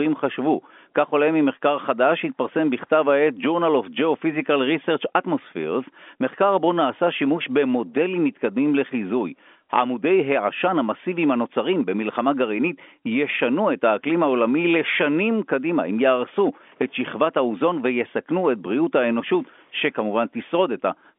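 Nothing stood out on listening to this speech, which comes through the narrow band of an ordinary telephone line with nothing audible above about 3.7 kHz.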